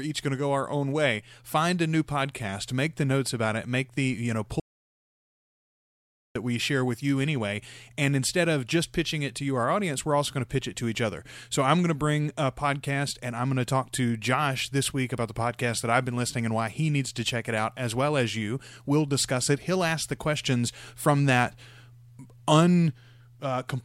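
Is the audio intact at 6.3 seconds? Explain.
No. At 6.3 seconds the clip is still inside an audio dropout to silence that runs from 4.60 to 6.35 s. The input was likely lost for that stretch, through a disconnected device, a failed link or a mute, while recording carried on writing silence. The speech cuts off abruptly, about 1.75 s of silence follows with no room tone at all, and the speech resumes just after 6.35 s. Whatever was said in that gap is gone.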